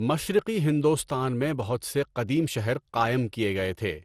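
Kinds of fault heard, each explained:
Generation loss: the speech sounds swirly, smeared and hollow, with blurred attacks and nothing above 15.3 kHz, likely from around seven successive lossy encodes at a rate that fits 96 kbit/s MP2. A single encode at that rate would sound far cleaner.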